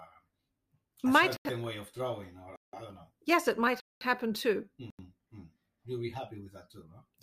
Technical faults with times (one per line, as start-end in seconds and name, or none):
1.37-1.45 block of digital silence
2.56-2.73 block of digital silence
3.80-4.01 block of digital silence
4.90-4.99 block of digital silence